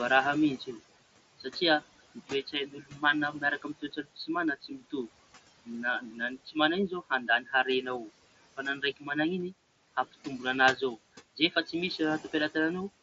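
Throughout the clip there are noise suppressor artifacts. The suppressor pulls the room noise down by about 18 dB in the gaps, then lets it swell back under the speech, so the background pumps. On a spectrogram, the noise floor between phrases drops to a speckled, patchy texture rather than a smooth band. Above about 7.7 kHz the display stays empty, which is simply the limit of the mSBC headset link.

From 2.15 to 4.29 s, the first speech cut by the noise suppressor appears. The suppressor mistakes soft stretches of speech for the room noise, which sits only about 16 dB below it. Across this span, well under a second of speech in all is pushed down by up to about 18 dB, and those parts sound swallowed. The waveform shows them as sudden dips in the envelope, and the spectrogram shows faded consonant energy.

The same cut recurs at 4.61 to 4.93 s and at 6.01 to 6.56 s, each time by up to about 18 dB. 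At 6.89 to 7.53 s it is milder, about 9 dB at most. It follows at 8.57 to 9.10 s by about 17 dB and at 10.76 to 12.55 s by about 16 dB. Each brief patch, a fraction of a second, leaves parts of the speech faint, seen as clipped tails in the envelope.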